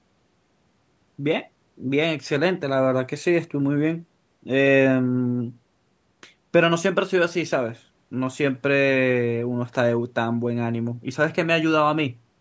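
No technical fault can be heard in this speech recording, which has passed through a call's microphone processing that normally trims the lowest bass and leaves nothing above 8 kHz.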